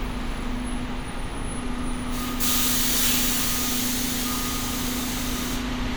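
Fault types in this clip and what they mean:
No faults detected in this everyday-sound clip; nothing in it calls for technical correction.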